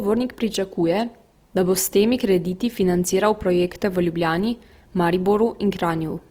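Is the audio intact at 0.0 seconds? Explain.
No. Opus compression, likely at a rate near 24 kbps, runs from the start: CELT mode fills starved bands with noise, so the speech sounds grainy and rough rather than swirly like MP3.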